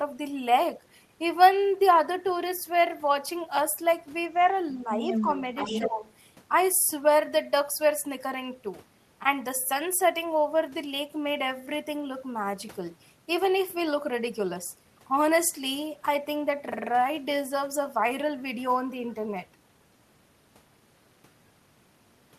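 From 4.83 to 5.27 s the speech is suppressed in double talk: the level sags by only a few decibels, likely because an echo canceller, hearing both sides at once, turned everything down. Overlapping this, from 5.08 to 5.89 s, the other side's voice leaks through, a second voice only slightly quieter than the main speech, most likely loudspeaker echo the canceller failed to remove. From 5.64 to 6.01 s the suppression returns more deeply, about 10 dB. From 6.06 to 6.13 s a brief, barely audible scrap of that other voice slips through again.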